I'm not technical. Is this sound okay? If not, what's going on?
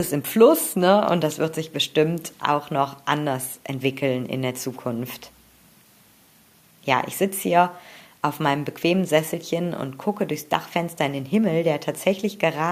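Yes, this sound is okay. Listening closely, there are no clicks, dropouts, or other glitches to point to.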